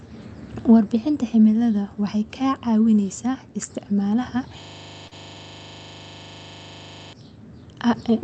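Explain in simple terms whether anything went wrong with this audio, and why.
Two things went wrong here. From 4.63 to 7.13 s there's a system hang loop: the computer froze while the sound hardware kept replaying one 40 ms slice of audio, 61 times over, giving a rapid stutter of about 25 repeats per second.

There's also a short stall from a late packet at 5.07 s. A piece of audio arrived late and the player had nothing queued, so it stretched the last bit of sound for about 41 ms and then picked up where it left off. Nothing is lost, but that moment hangs slightly too long.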